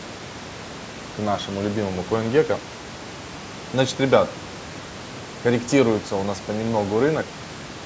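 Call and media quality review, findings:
No faults found in the speech; call microphone processing leaves nothing above 8 kHz and room noise sits about 18 dB below the speech, both as expected.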